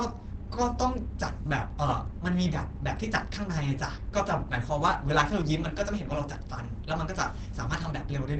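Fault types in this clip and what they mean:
Opus compression: throughout, the speech sounds muffled and hoarse, with nothing above 8.6 kHz. That fits Opus's speech mode at a low rate near 16 kbps, likely the cause. A spectrogram shows a hard, flat ceiling at 8.6 kHz.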